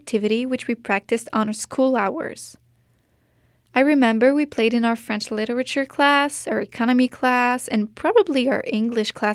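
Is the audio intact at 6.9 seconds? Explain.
Yes, at 6.9 seconds the speech plays through cleanly, with no dropout, click, distortion or other fault to be heard at that moment.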